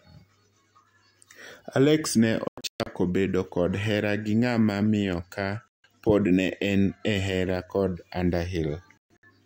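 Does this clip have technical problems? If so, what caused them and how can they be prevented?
Yes. The speech drops to silence three times. From 2.48 to 2.87 s, just before "bedo kod hera gi", it breaks into several short holes. From 5.68 to 5.84 s, between "gi ng'ama miyo ka" and "pod ne en e", there is one gap. From 8.98 to 9.24 s it breaks up again. This is digital broadcast dropout: the receiver muted whenever frames arrived corrupted or not at all, so that audio is lost. A stronger, steadier received signal through better antenna placement prevents it.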